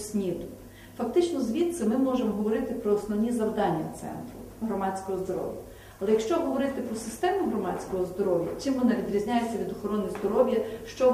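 No dropouts, clicks, distortion or timing errors are audible anywhere in the clip.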